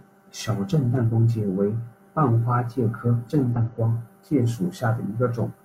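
Whole frames of the compressed speech went unplayed twice, either missing from the file or rejected by the decoder as damaged. At 1.05 to 1.08 s, between "小震" and "光介为半", and again at 3.52 to 3.56 s, between "花介科震" and "光介", the audio jumps ahead by about one 42.7 ms frame, so roughly 40 ms of speech vanishes. These are compressed frames skipped.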